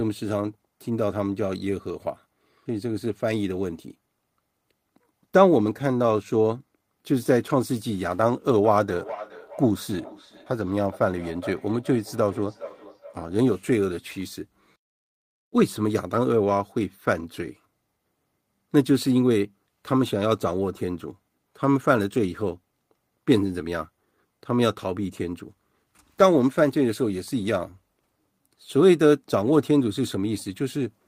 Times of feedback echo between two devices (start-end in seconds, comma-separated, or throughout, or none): 8.64-13.62